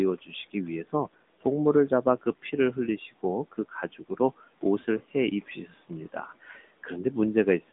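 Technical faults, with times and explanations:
throughout, AMR narrowband mobile codec: the speech sounds thin, boxed-in and somewhat buzzy, with nothing above 3.8 kHz and little below 200 Hz. The mobile codec rebuilds the voice from a vocal-tract model driven by few pulses, and its plainly audible coarseness fits a 10.2 kbps mode.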